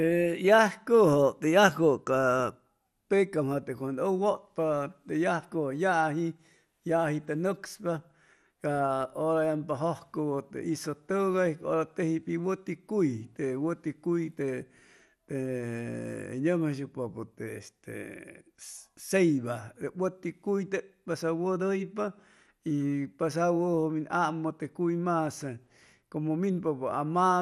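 Speech, dull and gurgling throughout, with upper bands flickering out and granular distortion. The likely cause is MP2 compression, which fits a low rate of about 80 kbps.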